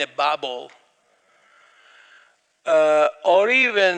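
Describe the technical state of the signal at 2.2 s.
At 2.2 s you're in the middle of a time-stretched section that kicks in at 1.0 s and runs to the end. The pace drops abruptly to roughly 0.6 times normal while the pitch holds steady, so the sound drags. That's likely software stretching the audio to fill a longer duration, keeping pitch by repeating short slices rather than simply slowing playback.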